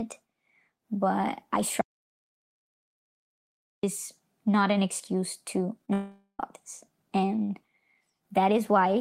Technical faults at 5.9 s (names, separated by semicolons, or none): short concealed packet loss; long network dropout